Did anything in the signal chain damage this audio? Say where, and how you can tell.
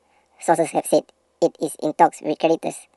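Yes. A wrong sample rate at the playback stage affects the whole clip: the speech runs 1.5 times too fast and sits about 7 semitones high, which fits 32 kHz material played at 48 kHz. On a spectrogram, harmonics and formants shift upward and every event is compressed in time.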